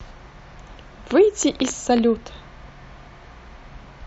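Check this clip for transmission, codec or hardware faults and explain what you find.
One hardware-type fault is present. From 1.11 to 1.99 s, a train of clicks: about ten similar pops, unevenly spaced at roughly 9 per second and well above the speech, likely from electrical interference or a faulty connection.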